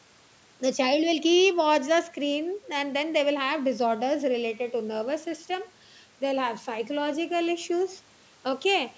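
No technical faults occur in the speech, which carries only the ordinary bass roll-off of call microphone processing with nothing above 8 kHz.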